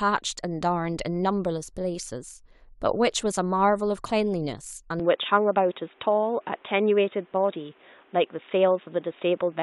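At 5.00 s the speech abruptly turns dull and boxy and stays that way to the end, with nothing above 3.8 kHz, no gap at the change and the loudness roughly unchanged. A faint new background noise, well below the voice, arrives at the same moment. That change of noise floor alongside the bandwidth loss is what separates this from a simple filter or codec drop, and points to the input likely having switched to a poorer device.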